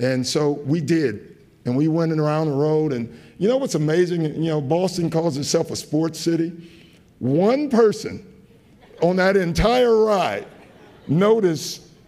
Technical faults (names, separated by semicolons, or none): none